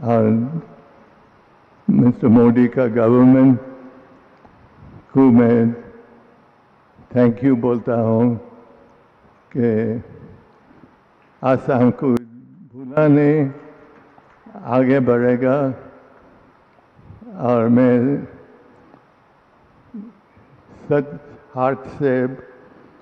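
From 12.17 to 12.97 s the sound suddenly drops by about 21 dB, with little left but the difference between the channels. That's likely one channel inverted: with one side's polarity flipped, everything common to both cancels when summed to mono.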